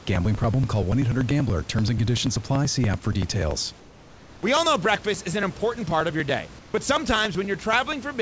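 A speech recording, band-limited with nothing above 8 kHz, carries periodic USB or driver dropouts from 0.06 s to the end. Every 96 ms a tiny slice of audio is skipped, so the speech ticks regularly. On a waveform these are small discontinuities at an even spacing. On a spectrogram they are thin vertical lines, visible only where there is signal. Between 3.80 and 4.43 s, and again between 6.59 and 6.74 s, the room background, normally about 24 dB below the speech, gives way to a steady, featureless hiss about 3 dB quieter. This is likely comfort noise in place of the background, generated at the receiving end during pauses in transmission. On a spectrogram the detailed background texture turns into a smooth, uniform wash. On the waveform it becomes a slightly lower, even noise floor.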